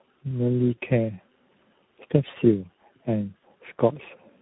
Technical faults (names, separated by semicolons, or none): tandem speech coding